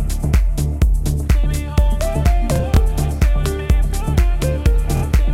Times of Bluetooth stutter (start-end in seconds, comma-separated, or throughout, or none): 2.56-2.81, 4.97-5.03